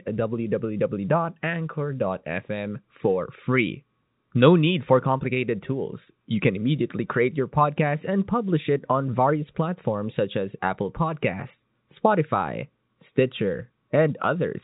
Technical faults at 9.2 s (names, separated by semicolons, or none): none